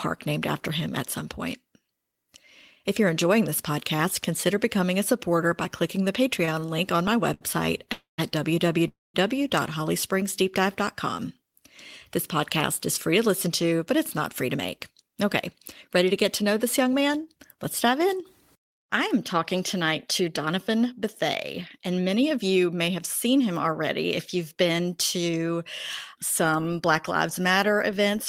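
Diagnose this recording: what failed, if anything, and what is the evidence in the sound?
Network trouble first: a stutter from 6.45 to 7.43 s, right after "supporter by clicking the", with five short stalls up to 68 ms. The jitter buffer kept running dry.

Then two call audio freezes, 7.93 to 8.20 s and 8.88 to 9.16 s. Each holds the last sound about a quarter-second, fading to silence, then resumes. Likely delayed packets.

Afterwards, jitter buffer speed-up: 13.47 to 17.09 s, 19.75 to 21.02 s after "I am talking", and 21.78 to 23.69 s before "if you've been". It runs 6 to 8% fast at unchanged pitch as the receiver trims pitch periods to drain the backlog.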